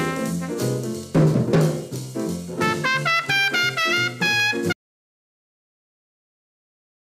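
At 4.73 s the sound cuts off abruptly and the clip stays in silence through to the end, with no room tone or background left. This is an audio dropout to silence, likely from the input being lost while recording continued writing silence.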